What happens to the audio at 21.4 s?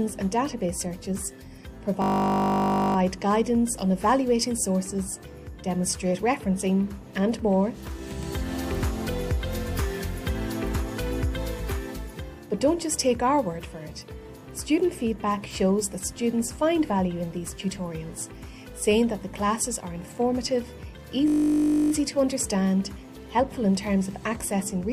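A steady buzz at about 50 Hz replaces the sound from 21.28 to 21.92 s. This is a system hang loop: the computer or driver stalled while the hardware kept replaying one 20 ms stretch of its ring buffer, about 32 times over, with essentially no audio lost.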